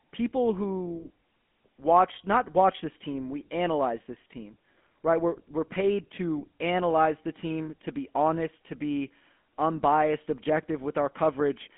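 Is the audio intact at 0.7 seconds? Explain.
No. At 0.7 s, as throughout the whole clip, the speech carries the GSM full-rate codec. It rebuilds the voice from a vocal-tract model driven by regular pulses, discarding most of the excitation detail, which fits a 13 kbps codec. Nothing survives above 3.8 kHz, inside a 200 Hz to 3.4 kHz line band. Plain telephone band-limiting only dulls the voice, but here the buzzy, gravelly roughness is plainly audible.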